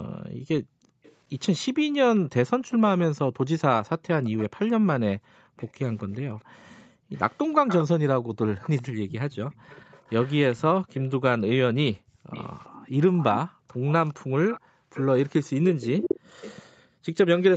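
From 0.00 to 1.03 s the room background is gated by the echo canceller: while the loudspeaker plays, it pulls the microphone down by up to about 40 dB, so the background drops out for about a second before returning on release.

From 1.03 to 2.71 s a copy of the far-end voice returns 405 ms late, about 30 dB below the speech. This is likely an echo leak, where the canceller failed to remove all of the loudspeaker sound the microphone picked up and sent it back.

Between 3.24 and 8.37 s the same gating returns, with dips of up to about 40 dB adding up to about two seconds.

From 4.24 to 16.68 s the echo leak comes back at the same 405 ms delay, now only about 15 dB below the speech.

Between 11.92 and 17.06 s the background is gated again, with dips of up to about 40 dB totalling about one and a half seconds.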